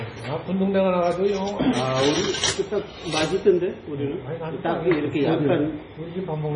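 An everyday-sound recording with heavy MP3 compression damage from start to finish. Nothing is present above 10.2 kHz, and the treble stops abruptly there. Weak detail flickers in and out, giving a watery, swirly texture. This likely comes from a very low bitrate, around 24 kbps.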